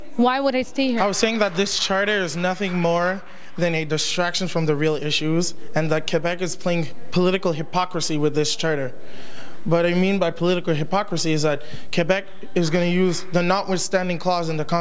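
Nothing in the signal points to a technical fault at any point: levels, continuity and timing all hold steady throughout.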